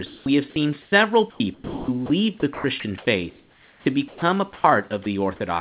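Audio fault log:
0.06–0.26 s, 4.54–4.64 s and 5.04 s: sound dropped by the voice detector. The sender's voice activity detector likely judged quiet sound to be background and stopped transmitting, so the receiver filled the gap with generated comfort noise. Just before "have seen", about 90 ms of real sound is lost inside a 200 ms fill. At 4.54 s about 80 ms is lost, and at 5.04 s a 20 ms fill removes about 10 ms. Each time the speech is clipped and flat noise sits briefly in its place.
0.82–0.92 s: comfort noise in place of the background. In the pause right after "have seen", transmission likely stopped, and the receiver played 100 ms of synthetic noise shaped only roughly like the real background. The genuine background, about 32 dB below the loud parts, gives way to a smoother, featureless hiss about 4 dB quieter. This is heard as a brief dip and change of texture in the quiet between words.
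1.3–2.1 s and 2.4–4.22 s: sound chopped by the voice detector. The detector likely toggled repeatedly between sending and muting. Comfort noise replaced about 480 ms of the first stretch and about 940 ms of the second, taking quiet syllables and word edges with it. The speech comes through choppy. The room noise sits about 42 dB below the speech, and the comfort noise stays band-limited to 4 kHz like the rest of the telephone-band audio, consistent with G.711 at 64 kbps.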